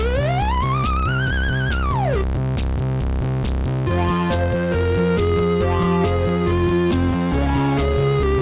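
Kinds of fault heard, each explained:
No technical faults can be heard in this music clip. Nothing in it calls for an entry under any kind of fault.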